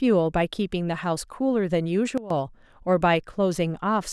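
A gain change, likely applied without a ramp, causes a sudden gain jump from 2.18 to 2.30 s, where speech and background noise drop together by about 15 dB.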